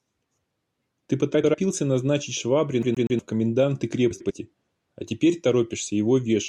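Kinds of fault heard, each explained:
Frames out of order: 1.34 to 1.54 s, and again 4.11 to 4.31 s just after "в коменданты". Two neighbouring runs of frames were decoded in swapped order, so each 0.2 s stretch plays its two 96 ms halves back to front, which fits runs of four frames. The speech turns into a brief garbled flutter. Nothing is lost, so timing afterwards stays intact.
CD stuck on one turn: 2.82 to 3.19 s, right before "в коменданты". This is the skipping-disc fault, where the pickup jumps back to the same point on each rotation. Here a single 0.12 s slice of speech plays three times in a row, with a tiny mute at every jump. The result is a quick, evenly spaced mechanical stutter lasting about 0.37 s before playback moves on.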